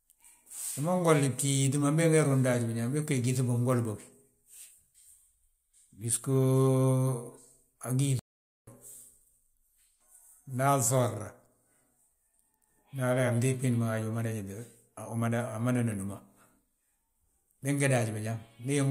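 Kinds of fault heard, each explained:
Playback stall: the speech drops to silence mid-flow for 480 ms, from 8.19 to 8.67 s, likely because the player ran dry or got blocked, then resumes.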